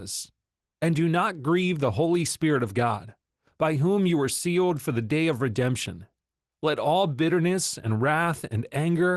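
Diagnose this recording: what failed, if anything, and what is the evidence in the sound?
Nothing failed: the speech comes through a WebRTC call path intact and continuous, with its top end ending near 12 kHz, consistent with an Opus stream at roughly 24 kbps.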